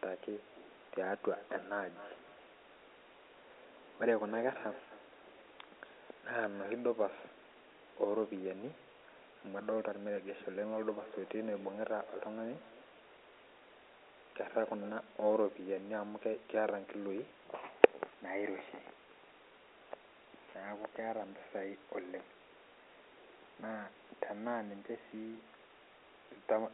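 From 1.35 to 6.94 s, and again from 10.93 to 15.11 s, a feedback echo between two devices returns each phrase about every 300 ms. A second device in the room replays the call, and this microphone captures it again. The local echo canceller cannot remove sound it did not play. The repeats peak at about 19 dB and 21 dB below the speech. They sound thin and ringing. The speech carries the narrow telephone band of G.711 coding.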